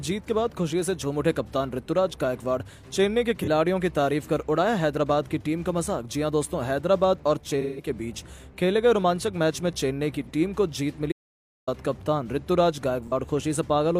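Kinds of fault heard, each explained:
AAC frame loss with concealment: at 3.40, 7.60 to 7.88, 10.25 and 13.07 s, the decoder patches over missing data by reusing the last good spectrum, giving brief smeared, noisy patches of about 43 ms each, and a longer 170 ms one that fits four lost frames.
Audio dropout to silence: from 11.12 to 11.67 s the sound cuts out completely for about 0.55 s, with no room tone at all. This is likely a momentary loss of the input signal while the recorder kept writing silence, so that stretch of sound is gone.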